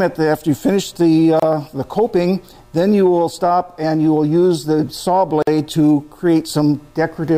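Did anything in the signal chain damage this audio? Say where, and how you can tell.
Yes, gaps at joins of encoded pieces, from the codec stage. Silences appear at 1.40–1.42 s (about 28 ms) and 5.42–5.47 s (about 49 ms), 4 s apart. The sound resumes where it stopped, so nothing is lost as in a dropout, because untrimmed encoder delay and padding were left in.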